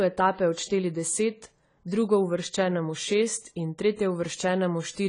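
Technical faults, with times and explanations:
Throughout, AAC compression: the speech sounds dull and smeared, with nothing above 10 kHz and a warbly, fizzy edge on sibilants. That's likely a low-bitrate AAC-LC encode, something like 24 kbps, where the encoder drops the top band and starves the rest of bits.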